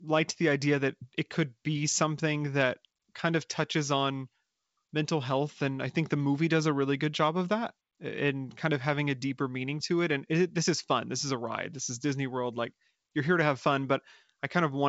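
Nothing goes wrong anywhere in this bit of speech, which comes across as ordinary G.722 wideband telephone coding at 64 kbit/s, with the sound topping out around 7.7 kHz, just as you'd expect from that path.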